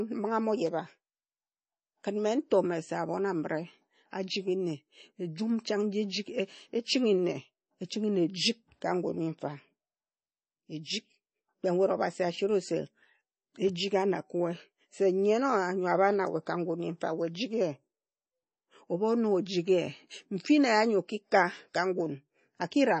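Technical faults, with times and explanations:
Throughout, MP3 compression: speech sounds watery, with nothing above 8.3 kHz, likely from a bit-starved MP3 encoder near 32 kbps cutting treble and dropping weak components.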